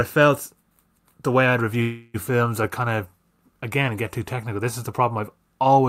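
Packets were likely held up in transit, draining the jitter buffer. From 1.81 to 2.16 s the receiver stretches the last sound into a fading fill. It is a call audio freeze: nothing is lost, and the speech resumes where it stopped, about 0.33 s late.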